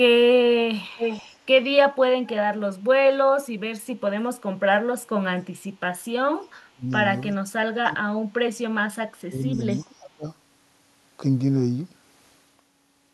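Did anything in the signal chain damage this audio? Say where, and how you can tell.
Yes. The damage sits in call processing. Echo leak shows as a delayed copy of the speech, about 0.39 s behind the original, at 0.96–1.37 s (only about 5 dB below the direct speech), 6.93–6.97 s (very faint) and 9.52–9.95 s (about 30 dB down). This is likely a far-end loudspeaker echo that the echo canceller failed to remove fully.

Speech suppressed in double talk appears as sudden dips in the talker's level, as deep as about 30 dB, at 6.68–6.87 s, 7.34–8.08 s, 9.26–9.45 s (shallower, about 20 dB) and 9.85–10.25 s. The likely cause is the echo canceller's suppressor confusing overlapping talk with echo and attenuating both.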